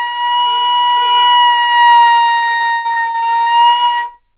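Repeated packet loss (robotic sound) from 2.34 to 3.48 s: eleven holes, the longest 124 ms, each filled by extending the previous sound, leaving choppy, broken audio.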